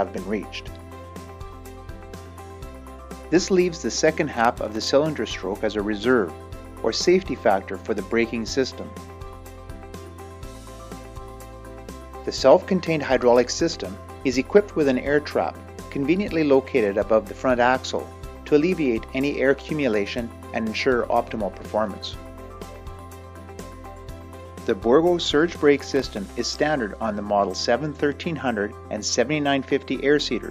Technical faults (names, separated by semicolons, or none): processor overload crackle